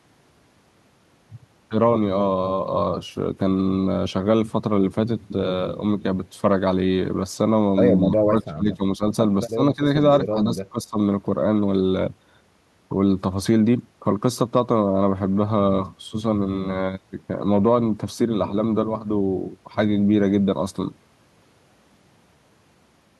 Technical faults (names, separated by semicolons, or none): speech suppressed in double talk